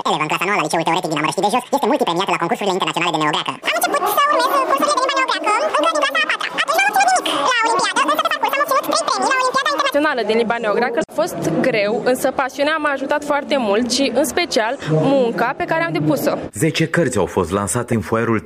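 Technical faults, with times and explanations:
0.00–9.94 s, audio read two samples at a time (double speed): the sound runs twice as fast and a full octave higher because pairs of samples were taken as single frames, unlike a clean sample-rate mismatch.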